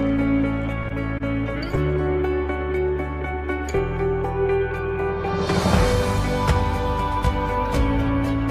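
Twice near the start, at 0.88 to 0.93 s and again at 1.18 to 1.23 s, the audio briefly hangs, with a sound drawn out slightly too long and carrying a faint buzz or dip. Each is a short stall from a late packet. The jitter buffer ran dry, so the receiver stretched the last sound, about 18 ms the first time and 16 ms the second, then resumed exactly where it left off. Nothing is lost, but playback ends up that much later.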